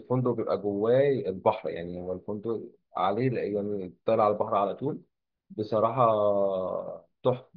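No technical faults are audible.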